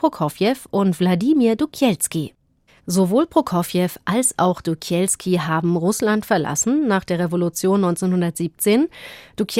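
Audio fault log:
No technical faults can be heard anywhere in this speech recording.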